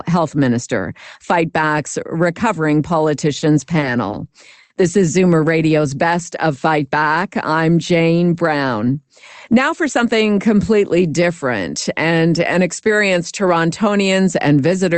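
Short stalls from a late packet occur at 3.39 to 3.44 s and 4.63 to 4.72 s. Each time the jitter buffer ran dry, so the receiver stretched the last sound, by 30 ms and then 70 ms, until the packet arrived. A sound is briefly held too long, with a slight buzz or dip, though none is lost.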